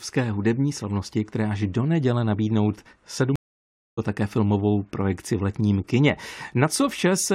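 At 3.36 s, right after "až do neděle nabídnout", the speech drops out in a stream reconnect. The connection broke and the player went quiet for about 0.62 s. Sound returns at 3.99 s with "a také filmovou projekci". A fresh decoder picked up mid-stream, so the first frame or so comes in muted or faded. The speech also resumes roughly half a second further on. That stretch of speech is simply missing, which fits a live stream.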